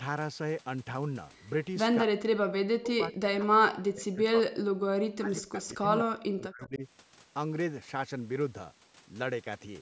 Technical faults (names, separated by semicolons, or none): speech suppressed in double talk; echo leak